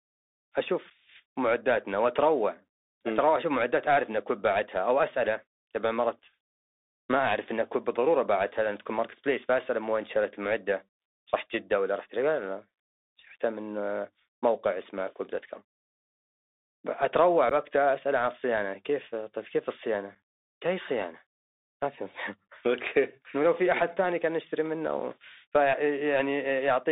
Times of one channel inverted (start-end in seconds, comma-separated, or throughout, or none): none